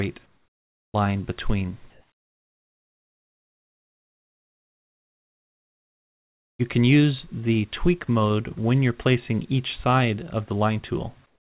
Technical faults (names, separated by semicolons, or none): comfort noise in place of the background